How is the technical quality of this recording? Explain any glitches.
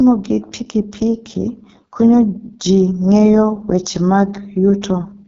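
The technical quality is poor: the whole recording carries heavy AMR wideband (HD Voice) codec damage. From start to finish the speech sounds rough and raspy, which fits the codec's lowest mode of about 6.6 kbit/s. At that rate the vocal-tract model and pulse excitation are too coarsely coded to capture the voice's fine structure, leaving a buzzy, grainy texture. On a spectrogram, harmonics look smeared and blotchy, the band from 6.4 to 7 kHz is filled with shaped, noise-like energy, and nothing appears above 7.5 kHz.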